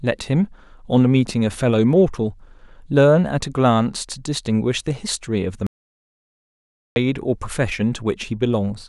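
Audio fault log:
5.67–6.96 s, audio dropout to silence: the input feed was likely lost for about 1.3 s while recording carried on writing silence, so the speech cuts off mid-flow into total silence with no room tone, then resumes abruptly, and whatever was said there is gone.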